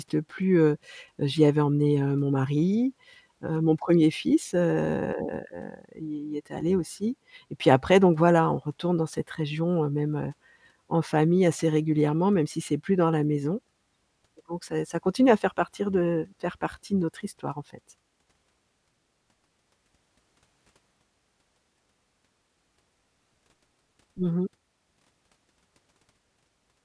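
Nothing goes wrong anywhere in this speech recording, so there's no fault to point to at any moment.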